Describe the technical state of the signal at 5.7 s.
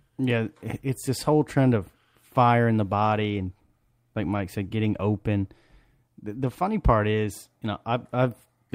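At 5.7 s the speech signal is intact, with no dropout, clipping, glitch or other technical fault audible at that moment.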